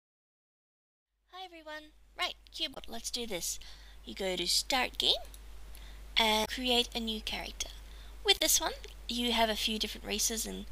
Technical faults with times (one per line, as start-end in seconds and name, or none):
2.71-2.77 damaged data in a compressed stream
6.41-6.48 damaged data in a compressed stream
8.35-8.41 damaged data in a compressed stream